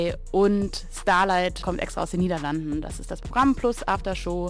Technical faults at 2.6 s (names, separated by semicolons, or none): none